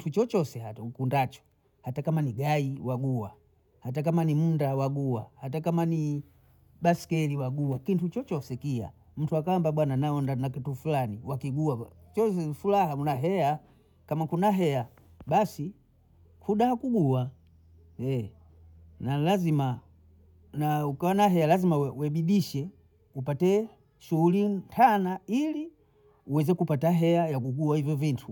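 Nothing technical goes wrong in this speech recording; there's no fault to point to anywhere along it.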